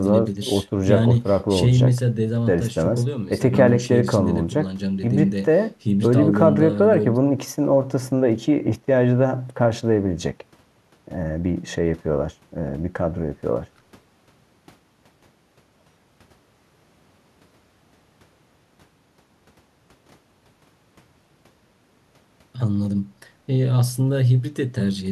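Listening through the speech, nothing stood out as a technical fault at any point.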